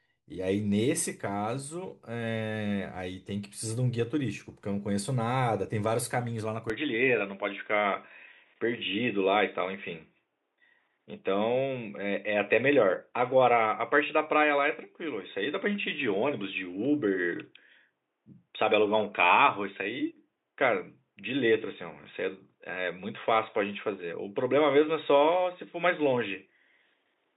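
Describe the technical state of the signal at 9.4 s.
At 9.4 s the speech sits inside an input switched to a poorer device, running from 6.70 s to the end: the band stops near 3.8 kHz, the level shifts about 5 dB, a faint new noise floor appears, and the sound turns dull and boxy, likely from the recording moving to a narrower-band microphone.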